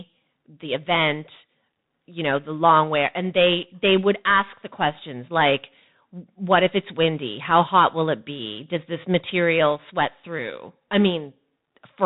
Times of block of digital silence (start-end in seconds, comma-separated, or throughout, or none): none